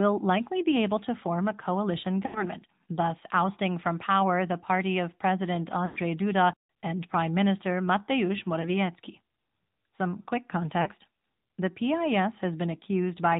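Throughout, the speech carries AMR narrowband mobile codec damage. Nothing above 4 kHz survives, and the pulse-driven vocal tract model leaves a plainly buzzy, synthetic edge. That character fits one of the middle AMR-NB modes, around 10 kbps.

Lost AMR speech frames occur at 2.26–2.44 s, 5.86–5.99 s, 8.62–8.72 s and 10.82–10.90 s. The decoder reuses the last good pitch and vocal tract settings at falling gain. The longer gaps therefore smear and fade, 8.62 s is a brief dip, and the voice returns rough.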